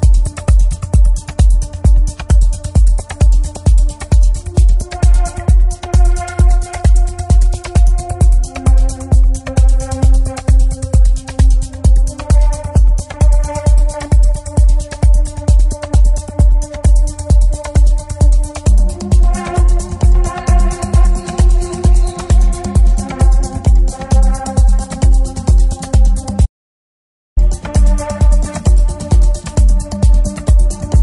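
From start to end, the sound has a watery, swirling quality. Faint high detail flickers in and out. Sharp edges sound smeared. This is likely MP3 compression at a low bitrate, which fits something around 48 kbps. At that rate the encoder cannot cover every frequency line. It drops weak ones frame by frame, and those lines switch on and off audibly. The damage is plain to hear.

At 4.54 s comes a pre-echo. A short hiss rises about 12 dB above the background. It lasts about 27 ms, up to 4.57 s, just ahead of an attack. The attack itself sounds softened. The codec spread its noise over a whole block, which fits a window of about 48 ms. The encoder seems not to have switched to short blocks here. So noise meant for the loud attack leaked into the quiet moment before it.

At 26.46 s there is an audio dropout to silence. The sound cuts off mid-flow. The gap is silent, with no room tone. Sound returns at 27.37 s, so about 0.91 s is lost. 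The input was likely interrupted while the recorder kept writing silence. Whatever sounded during that gap is gone.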